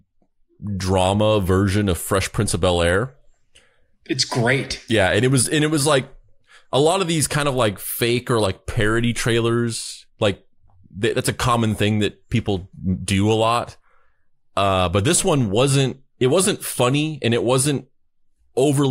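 An unstable converter clock, sample clock jitter of around a microsecond, makes this speech clip sample slightly early or late from 8.50 to 14.45 s. The resulting error, roughly 40 dB below the signal, adds a hiss or roughness that grows on loud, bright sounds and disappears in pauses.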